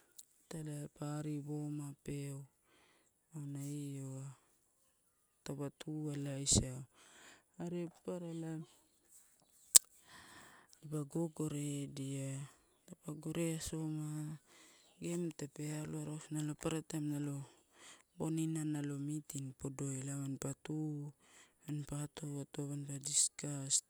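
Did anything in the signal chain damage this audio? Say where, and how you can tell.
No, nothing along the chain from capture to playback left any damage you can hear in this speech.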